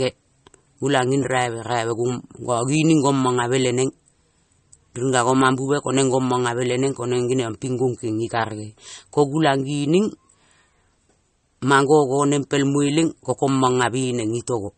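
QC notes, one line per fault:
Throughout, likely MP3 compression: the speech sounds watery and swirly, as weak frequency lines are zeroed and flicker on and off between frames. A spectrogram shows a hard ceiling at 8.4 kHz and patchy, blocky holes, which fits a low bitrate around 36 kbps.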